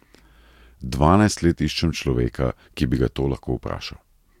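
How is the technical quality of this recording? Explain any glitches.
No glitches or technical faults are audible anywhere in the recording.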